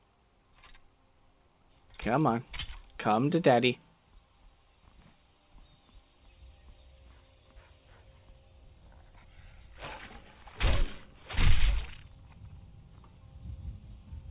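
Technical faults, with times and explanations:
No technical faults can be heard anywhere here.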